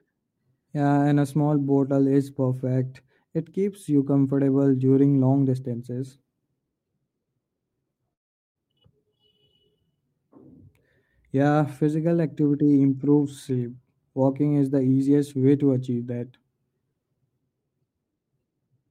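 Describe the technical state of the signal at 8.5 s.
At 8.5 s the audio is inside a silent gap from 8.13 to 8.57 s, likely a long network dropout. A fading buzz gives way to silence, and speech resumes with that stretch lost, unlike a brief click-length glitch.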